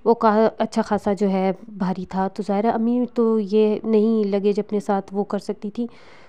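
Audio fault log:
No fault is heard anywhere in this clip. Nothing in the audio calls for a log entry.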